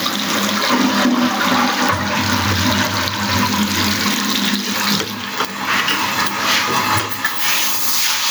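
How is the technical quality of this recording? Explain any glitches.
The recording suffers from gain pumping from start to finish. The input gain was likely set far too high, with a fast limiter or compressor repeatedly hauling it back down on each loud sound. The gain ducks under every loud event, swinging by roughly 20 dB, so the level breathes and loud and quiet parts sound squashed together.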